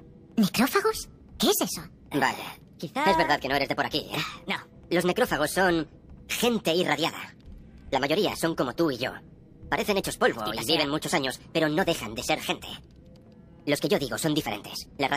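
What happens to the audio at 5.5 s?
At 5.5 s the audio is still under the wrong sample rate that runs the whole clip: everything plays 1.38 times too fast and about 5.6 semitones high, which fits 32 kHz material played at 44.1 kHz without conversion. A spectrogram shows every component shifted upward and all events compressed in time.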